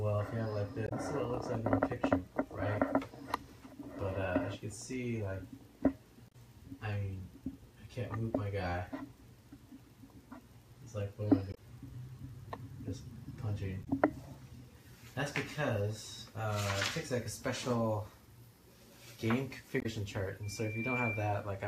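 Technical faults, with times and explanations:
0.85–0.92 s, 6.28–6.35 s, 11.51–11.58 s, 13.81–13.88 s, 19.79–19.86 s: damaged data in a compressed stream. Each is a brief disturbance of about 70 ms where corrupted bytes made the decoder misread frames, lose sync and skip ahead to the next valid frame header.
20.43–21.53 s: loudspeaker feedback squeal. A single 2.4 kHz tone swells over roughly half a second to a few decibels above the sound. The microphone is picking up its own loudspeaker, and loop gain exceeds one at that frequency, so the tone keeps feeding itself.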